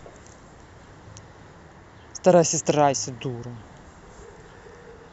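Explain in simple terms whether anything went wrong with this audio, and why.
Listening through the recording, nothing stood out as having gone wrong with the sound.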